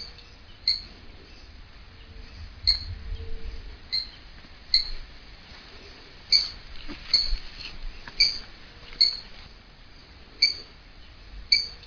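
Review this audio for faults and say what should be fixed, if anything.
Nothing here needs fixing; no faults are audible.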